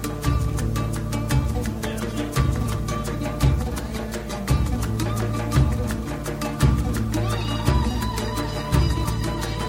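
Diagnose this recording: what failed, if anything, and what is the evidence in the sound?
Nothing in this recording points to a failure at any stage of the chain. There is no event in the sound to tie to a time or a mechanism.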